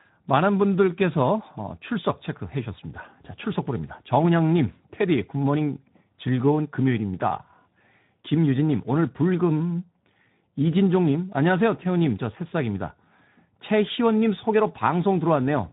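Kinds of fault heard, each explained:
Speex codec: The whole clip runs through Speex, a CELP speech codec. The damage is plainly audible: the speech comes out noisy and hoarse, as the excitation is starved of bits. That fits a low setting, around 11 kbps.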